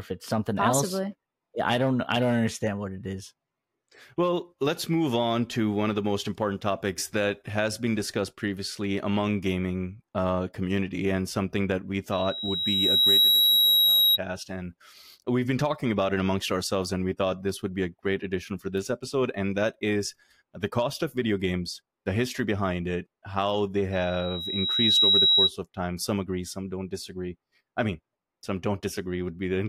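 At 12.12 s and again at 23.92 s, loudspeaker feedback squeal appears. The microphone is hearing its own loudspeaker. At 3.8 kHz the loop gain tops one. A tone swells over about a second, rising well above the speech, then stops at 14.18 s and 25.51 s.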